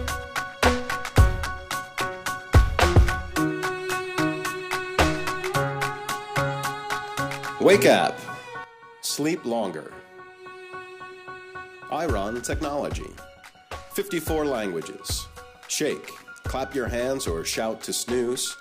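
A sudden gain jump at 8.64 s drops the audio by about 10 dB, and it stays at that lower level to the end. The sound and its background noise fall together in a single step, most likely a digital gain change applied without any ramp.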